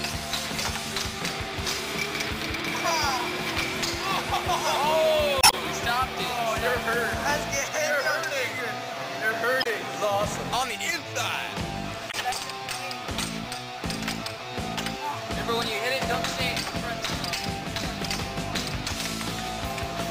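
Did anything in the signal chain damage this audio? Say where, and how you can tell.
Yes. The damage sits at the codec stage, as damaged data in the compressed stream, heard three times: 5.40 to 5.54 s, 9.60 to 9.67 s, and 12.08 to 12.15 s. Each is a short chirp, squawk, click or hole breaking the flow. The compressed bytes there were corrupted. The decoder misread those frames, lost sync, and hunted for the next valid frame header before the sound settled again. The longest break is about 0.14 s.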